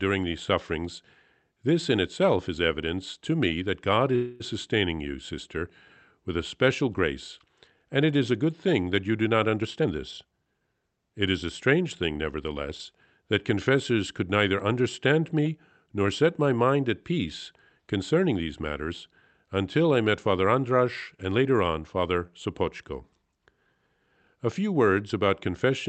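A speech clip carried over a call path whose Opus coding caps the audio near 8 kHz, visible as an empty band above that line on a spectrogram. From 4.15 to 4.42 s there is a call audio freeze: a fading buzz-like continuation of the last sound, about 0.25 s long, likely from packets held up so the jitter buffer ran dry, seen as smeared repeated harmonics decaying on a spectrogram. Right after "that you do not", from 9.61 to 11.05 s, a jitter buffer speed-up makes the speech run about 117% fast at unchanged pitch, roughly 0.3 s trimmed away, showing as compressed syllable spacing.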